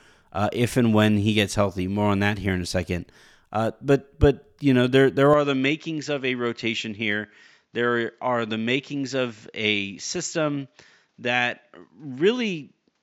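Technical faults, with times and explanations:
5.34–13.03 s: likely input switched to a poorer device. The sound abruptly dulls, losing everything above 7.6 kHz, turns a few dB quieter and gains a faint new noise floor.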